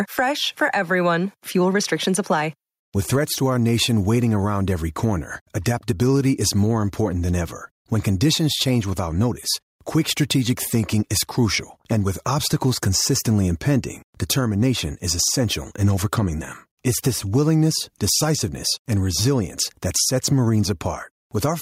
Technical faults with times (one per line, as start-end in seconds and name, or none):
0.00-21.61 gain pumping